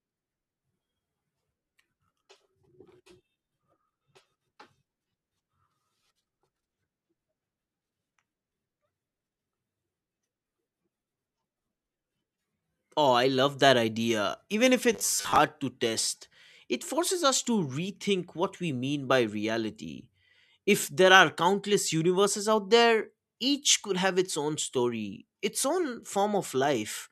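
At 14.93 to 15.38 s, before "to test it forces", robotic sound from repeated short buffers gives a rigid 100 Hz metallic buzz, likely from looping 10 ms chunks rather than silent dropouts.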